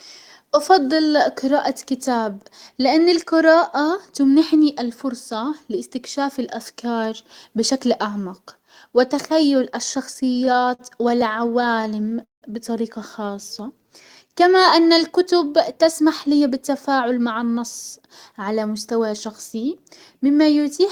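Packets reaching the receiver late in this speech clip emptied the jitter buffer over and over between 10.13 and 12.44 s. The result is repeated stalls (stutter): 27 brief holds, the longest 178 ms, filled by stretching the last sound. Nothing is lost, but that stretch drags and stutters. Next, with the buffer low, the receiver built up a reserve through a jitter buffer slow-down from 13.30 to 14.35 s. It repeated pitch periods to add 86 ms, so the audio runs at 93% speed with unchanged pitch and sounds drawn out. Later the buffer held too much audio, and two jitter buffer speed-ups trimmed pitch periods, at 16.27–17.59 s and 18.00–19.54 s. Each removes roughly a tenth of a second, so the speech runs at 107% speed and sounds hurried.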